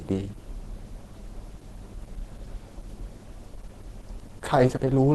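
Opus compression, likely the cause, is audible throughout the speech: the top end is capped and the speech sounds muffled and hoarse. That fits a low rate near 16 kbps, where the encoder falls back to its hybrid speech mode with a narrowed super-wideband range.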